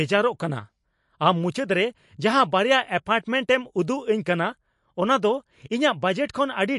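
From start to finish the speech carries plainly audible MP3 compression artefacts, likely from low-bitrate encoding in the region of 48 kbps. Nothing remains above 11.3 kHz, and weak spectral detail flickers in and out between frames, giving sibilants a watery, swirling texture and softening consonant edges.

From 6.26 to 6.29 s a pre-echo precedes a sharp onset. The transform block containing that attack spread its quantisation noise backwards across about 30 ms of quieter signal, so a brief hiss leads into the onset and the attack itself sounds blurred.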